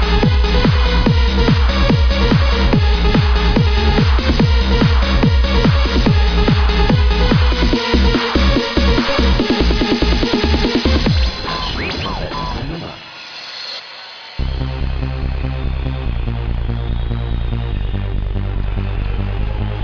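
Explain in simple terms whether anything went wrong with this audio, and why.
Nothing went wrong with this audio: it holds steady throughout, with no dropouts, gaps, glitches or sudden jumps in level anywhere in the recording.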